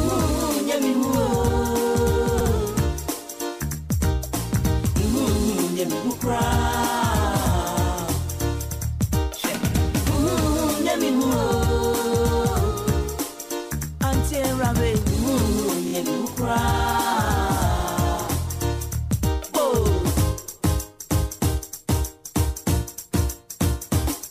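The audio has repeated frames: short blocks of compressed data replay, causing stutters at 2.39 s (78 ms block), 8.71 s (105 ms), 15.87 s (26 ms, played twice more) and 17.78 s (52 ms).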